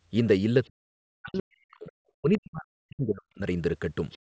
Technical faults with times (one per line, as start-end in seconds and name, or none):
0.64-0.70 other side's voice leaking through
0.72-1.92 speech suppressed in double talk
1.76-1.92 other side's voice leaking through
2.20-3.43 speech suppressed in double talk
4.10-4.18 other side's voice leaking through